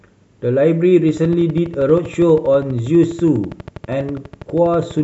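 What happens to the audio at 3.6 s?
At 3.6 s a train of clicks is running, from 1.09 to 5.00 s: regular ticks 12.3 per second, about as loud as the speech, likely from interference. Waveform spikes and spectrogram stripes appear evenly spaced.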